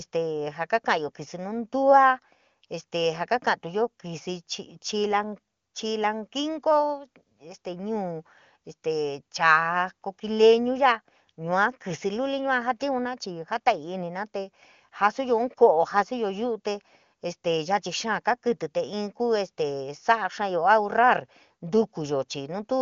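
No technical faults are audible.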